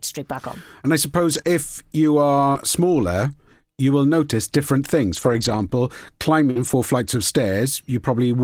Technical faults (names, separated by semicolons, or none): scattered short gaps